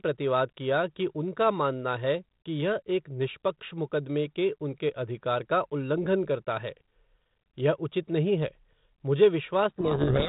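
At 9.7 s, just after "उचित नहीं है मुझे", sender and receiver stop agreeing on the bit order of the G.726 code words. This codec payload misread makes the decoder rebuild wrong sample differences, burying the speech in harsh distortion through to the end at 10.29 s.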